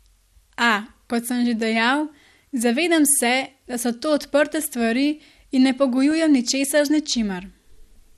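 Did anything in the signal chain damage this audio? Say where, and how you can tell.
Yes. The speech sounds dull and muffled all the way through, with a gurgling, granular roughness. That points to the codec stage, most likely MP2 compression at a low bitrate, consistent with something around 80 kbps. MPEG Layer II divides the spectrum into 32 sub-bands and shares out bits among them. Short of bits here, the encoder drops the upper bands and coarsely quantises the rest, taking away brightness and leaving the grainy texture.

A second fault sits in the transmission path: DAB burbling. From 3.72 to 3.84 s there is a burbling disturbance, and a much briefer disturbance follows at 6.11 s. The first burst sounds like it spans several frames, and the second like a few. Bit errors at a low rate got past error correction into the MP2 data. Corrupted samples put short blips of noise into single sub-bands.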